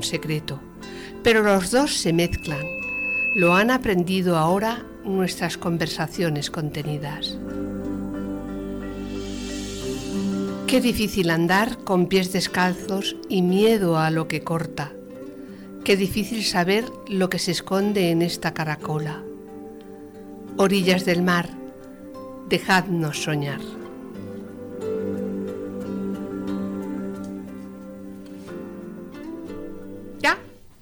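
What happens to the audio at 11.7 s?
Nothing goes wrong at 11.7 s; the audio plays through that moment intact, with no dropout, click or distortion.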